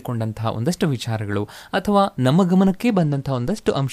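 From 2.88 s to the end at 3.93 s, a Bluetooth SBC bit pool drop dulls the treble and adds gritty noise. This fits the bit pool falling from 31 to 13, near 94 kbps.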